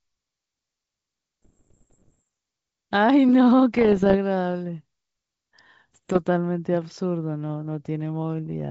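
From 1.43 to 2.23 s, 3.74 to 4.16 s and 5.93 to 6.19 s, the G.722 speech carries bit errors on an ADPCM link, at a rate just under one percent. Each flipped bit disturbs the decoder's step size and predictor, so pops ring into rough bursts with brief level jumps.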